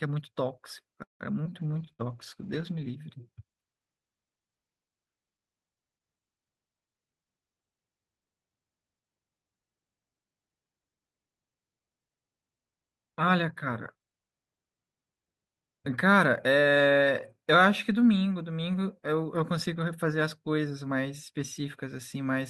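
Call audio freeze, 1.03 to 1.23 s, in this speech recording: the sound stalls, a brief continuation of the last sound fades into about 140 ms of silence, and 166 ms of delay is inserted with nothing lost, most likely because packets were held up and the jitter buffer ran dry before they arrived. A skip ahead follows at 1.44 to 1.48 s, where roughly 70 ms of speech vanishes and the two sides are joined almost directly; the receiver discarded late-held audio to claw back some of that extra delay, around 50 ms. Jitter buffer slow-down comes at 1.50 to 1.79 s, where the speech drags to about 84% speed at unchanged pitch because the receiver stretched it by 56 ms, repeating short pitch-period slices to rebuild its reserve, giving drawn-out sounds. A call bitrate drop runs from 1.62 to 3.07 s: the speech turns coarse, watery and dull, and stays at its worst for about 1.3 s, which fits the encoder being pushed from around 64 kbps down to roughly 15 kbps after the bandwidth estimate fell, losing detail and high-frequency content. 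Inside that stretch, a burst of packet loss at 1.93 to 2.02 s leaves about 60 ms of speech missing; the receiver covered 59 ms by extending the preceding sound as a fading buzz or hiss before resuming further along.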